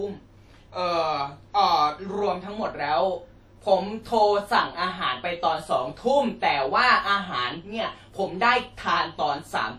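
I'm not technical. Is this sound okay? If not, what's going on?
No. The speech was likely shrunk with WMA compression, which saves space by discarding detail it judges unimportant. That damage is plainly audible from start to finish: the speech rings and sounds washy, with a hiss that swells and fades along with it.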